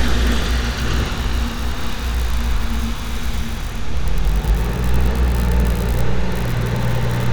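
Listening closely, nothing in the audio stood out as a technical fault.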